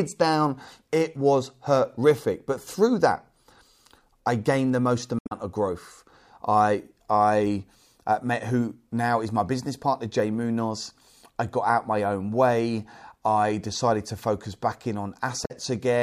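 Damaged data in a compressed stream hits this speech recording twice: corrupted bytes in the encoded file make the decoder misread those frames and lose sync until it finds the next valid frame header. Each break is heard as a short, garbled blip in place of the speech, first from 5.16 to 5.32 s and again, more briefly, from 15.44 to 15.51 s, near the end of the clip.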